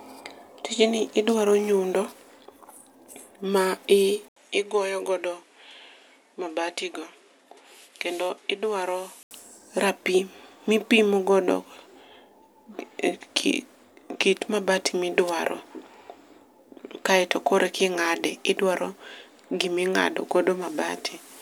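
Speech, and from 4.28 to 9.31 s it drops a few dB and goes dull, with nothing above 12.4 kHz, a fresh hiss roughly 35 dB under the voice and an 80 ms gap at the switch, so the input likely switched to a poorer device there.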